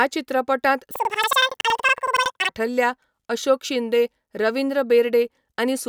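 This is a speech clip with one fault. From 0.91 to 2.58 s it shows planar audio read as interleaved. The voice jumps an octave high, 12 semitones up, with a steady flutter at about 10.8 Hz. Each block of roughly 93 ms, which fits a 4096-sample block, stores all left samples and then all right. Read as alternating pairs, each block plays twice at double speed, left then right. The overall pace stays correct.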